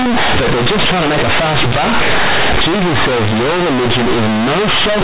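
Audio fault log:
throughout: companded audio read as linear. The speech was coded as mu-law telephone audio but is played back as plain linear 8-bit samples without expansion, so each sign change flings the output across about half its range. Quiet passages come out as loud as peaks, giving a harsh, buzzy distortion with heavy noise in pauses. Unlike ordinary clipping, the pauses between phrases are noisy rather than silent, while the band still stops at 4 kHz.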